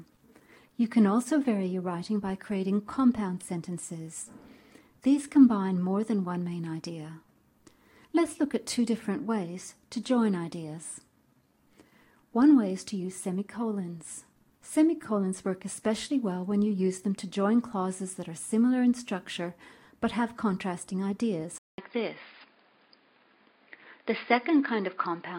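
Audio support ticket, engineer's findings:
Input switched to a poorer device at 21.58 s, likely: 0.2 s gap, then nothing above 5 kHz and a fresh faint noise floor. The gap and new noise point to a device switch rather than a codec bandwidth drop.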